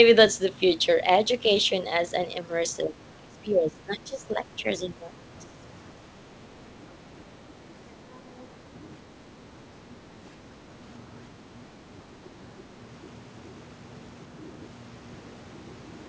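A speech recording that has come through a call, where the content above 8 kHz is gone, consistent with G.722 at 64 kbps. Between 2.83 and 5.66 s the talker gets pushed down in stretches adding up to roughly two seconds, dipping as much as about 15 dB. That's speech suppressed in double talk: the echo canceller likely couldn't tell the local voice from loudspeaker echo while both sides were talking, so it attenuated everything. A much smaller version of the same thing shows up at 12.12 to 12.34 s, a brief dip of about 5 dB. Then at 8.39 to 8.43 s there's a tiny scrap of the other side's voice leaking through, sitting about 30 dB under the speech, so it's very faint. That's likely echo from the far end's audio on the loudspeaker that the canceller didn't fully remove from the mic.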